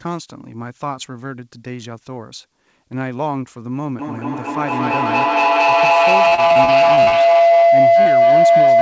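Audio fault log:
3.98 to 8.82 s: feedback howl. A loop between microphone and loudspeaker gains level on each pass. Repeats grow instead of fading and narrow to around 700 Hz. The loop repeats roughly every 200 ms. It peaks about 13 dB above the speech.
6.29 to 7.15 s: repeated packet loss (robotic sound). Eight gaps fall close together, the longest 36 ms. Each is patched by continuing the last sound. About 235 ms is filled in, over a quarter of this stretch. The sound turns choppy and robotic.
8.02 s to 8.08 s: short concealed packet loss. About 30 ms never arrived in time. The receiver extended the preceding sound to cover it, then blended back into the real signal. The result is a brief smear within the ongoing howl.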